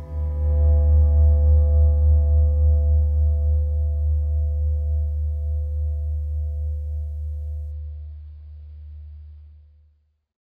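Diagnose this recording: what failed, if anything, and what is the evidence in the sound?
At 7.72 s the sound turns dull with no gap, losing everything above 5 kHz as artefacts thicken. This is an adaptive stream at a lower bitrate after the network slowed, consistent with about 16 kbit/s.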